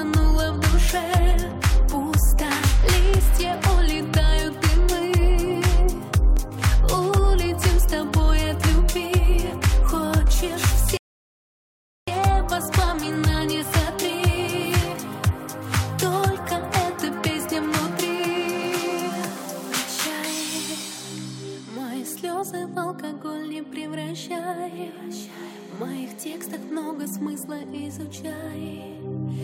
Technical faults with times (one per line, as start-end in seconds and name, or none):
6.37-6.61 loud pop
10.97-12.08 rebuffering stall